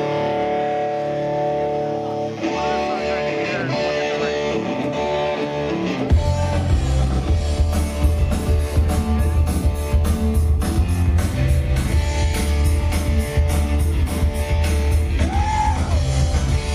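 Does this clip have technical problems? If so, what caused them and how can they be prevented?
No, this clip has no technical problems, so there is nothing to prevent.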